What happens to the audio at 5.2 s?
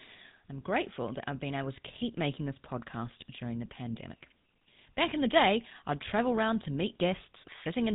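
At 5.2 s the speech is still going through the GSM full-rate codec, which runs through the whole clip at a rate that fits 13 kbps. Rebuilding the voice from sparse pulses makes it plainly buzzy and gravelly, with nothing above 3.9 kHz.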